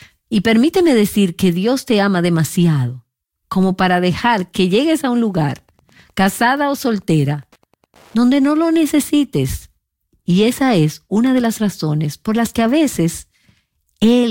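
Speech, with a burst of Wi-Fi interference from 5.22 s to 8.75 s, starting just after "que llegues a un". A steady tick repeats every 102.4 ms, about ten times a second. The ticks are the radio's beacon. A nearby Wi-Fi transmitter is being picked up and rectified by the audio circuit. The interference sits well under the speech, roughly 40 dB down.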